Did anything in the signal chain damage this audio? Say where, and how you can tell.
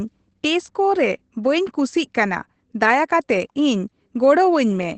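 Yes, at the codec stage: across the whole speech clip the sound is muffled, slightly hoarse and faintly robotic, with nothing above about 8.6 kHz. That is Opus voice compression in its SILK mode at wideband, coding the excitation coarsely at a low rate that fits about 12 kbps.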